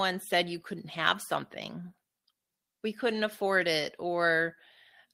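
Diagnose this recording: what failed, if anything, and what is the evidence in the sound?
Nothing failed in this recording, and no stage of the chain shows a fault in the sound. The speech comes through as an ordinary capture with no break or disturbance at any point.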